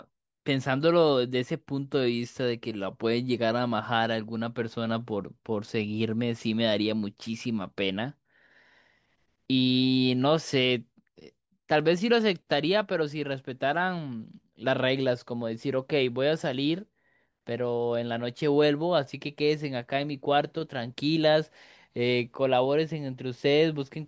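Listening to this speech recording, nothing technically amiss stood out at any point.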